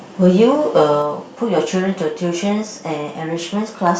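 From 0.25 to 0.45 s the loudest syllables take on a harsh, crackling edge, and again from 0.77 to 0.83 s. This is microphone overload. The peaks run about 1 dB past the converter's limit. Their tops are flattened, though only a small fraction of samples. The input volume was likely set too high. At 1.02 s the speech and the background drop together by about 4 dB. At 2.04 s they drop again by about 2 dB. These are likely the microphone volume being stepped down automatically after the earlier distorted peaks. From 3.86 to 3.90 s the crackle returns, about 2 dB over, which is microphone overload once more.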